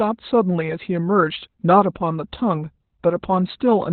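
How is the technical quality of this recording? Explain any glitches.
Pretty rough, technically: the whole speech clip carries heavy Opus voice compression from start to finish. The codec is running narrowband SILK, predicting the voice's spectral shape and coding the excitation coarsely, and the level of damage points to a bitrate around 8 kbps. Nothing survives above about 4.2 kHz, so it sounds muffled, hoarse and slightly robotic.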